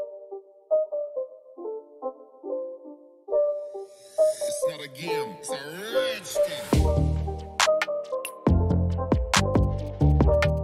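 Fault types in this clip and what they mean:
GSM signalling bursts: a nearby 2G phone's short radio bursts, rectified by the audio circuit, give a faint galloping dit-dit-dit of short 217 Hz buzzes, about 30 dB below the sound, from 9.40 to 10.59 s. Unlike steady in-call GSM buzz or mains hum, it comes in brief irregular clusters.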